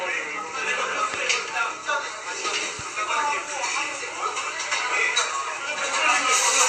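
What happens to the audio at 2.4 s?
At 2.4 s the sound is dull and gurgling, with nothing above 14.4 kHz. That points to MP2 compression, likely at about 80 kbps, starving upper sub-bands throughout.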